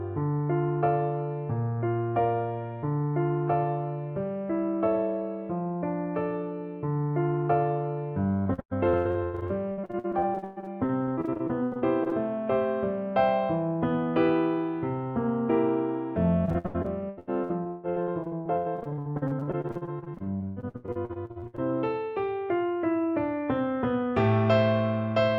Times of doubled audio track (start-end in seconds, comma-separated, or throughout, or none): none